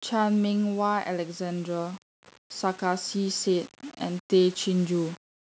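From the start and through the whole speech clip there is a grainy distortion that rides along with the signal rather than sitting underneath it as steady hiss. The error sits around 25 dB below the speech, so quiet syllables and decays turn rough and sputter between a few coarse levels. This is low bit depth without dither, likely from rounding to very few amplitude steps, which fits roughly 6 bits. With no dither to decorrelate it, the error tracks the waveform.

From 2.79 s to 5.24 s the automatic gain is rising. The level climbs gradually by about 4 dB over those two and a half seconds, and the speech and the background swell together. This is the gain control judging the input too quiet and raising its gain gradually. The top end stops at 8 kHz, consistent with call microphone processing.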